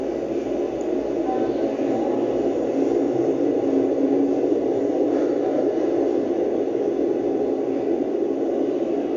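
No technical faults occur anywhere in this recording of sounds, so there is nothing to place in time order.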